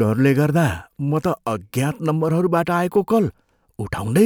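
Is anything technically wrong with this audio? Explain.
No, nothing technically wrong can be heard here.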